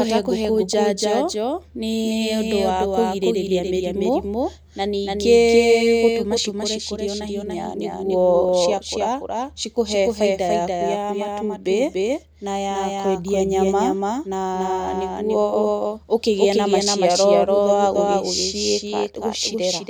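From start to finish, the speech is accompanied by a doubled audio track: a second copy of the same audio trails the first by roughly 0.3 seconds, at about the same loudness. The cause is likely the signal being captured twice, once through a slower path. Room echo or reverb would decay and colour the sound, but this copy is full-band, and the single repeat is clean and undamped.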